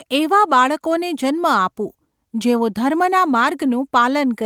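Nothing in the speech here calls for comment: no faults turn up anywhere in the recording.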